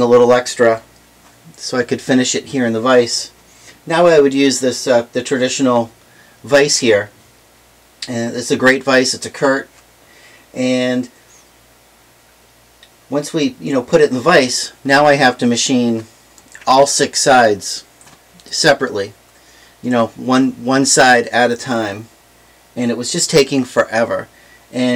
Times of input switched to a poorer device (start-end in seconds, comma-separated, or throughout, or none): none